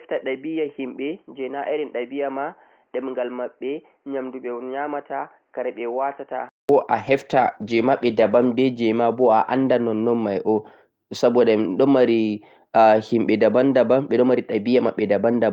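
From the start to 6.69 s, the speech is dull and boxy. Nothing reaches above 3.1 kHz. The level sits roughly 10 dB lower, and a steady noise floor lies some 40 dB under the speech. At 6.69 s there is a silence of about 0.2 s, and then the full band returns. This points to an input switched to a poorer device, likely a narrowband headset or microphone, before the system returned to the normal input.

From 7.03 s to 9.07 s comes a call bitrate drop. The Opus stream, otherwise carrying sound up to about 12 kHz, falls from 32 kbps to 16 kbps. It stays at the lowest rate for 1.22 s. With half the bits, the encoder codes the speech more coarsely. The sound turns rough and watery, and the top end dulls. It clears once the rate recovers.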